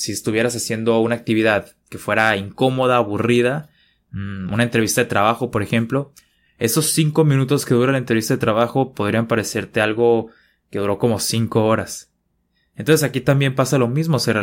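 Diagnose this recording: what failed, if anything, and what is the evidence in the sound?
Nothing stood out on listening to this speech recording; no stage of the chain gives itself away with an audible failure.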